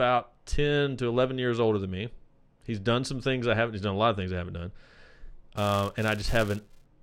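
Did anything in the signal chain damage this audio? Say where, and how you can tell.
Yes. From 5.56 s to 6.86 s the speech carries a buzz at 345 Hz that rises and falls with its level. This is a filter restarted on every block in the processing buffer, which fits a 128-sample block. Each block starts from silence and ticks.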